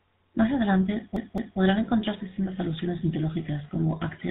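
The clip is speech, and the GSM full-rate codec damage is plainly audible throughout. The sound is buzzy and gravelly. Nothing above 4 kHz gets through. The codec models the vocal tract and excites it with sparse regular pulses, and the result fits a 13 kbps GSM full-rate stream. From 1.16 to 1.59 s there is a CD stuck on one turn. A 215 ms piece of audio plays twice more, with a brief mute at each jump, before "encontrarse sendas alusiones mitológicas". A scratch throws the laser back one track on every rotation, and that produces this quick, even stutter.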